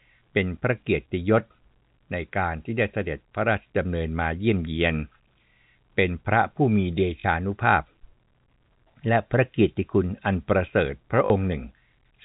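Packet loss with last packet repeated, at 7.2 s and 11.26 s: each time about 40 ms went missing, which fits two 20 ms packets, and the receiver replayed the last one, giving a brief robotic stutter over the telephone-band G.711 sound.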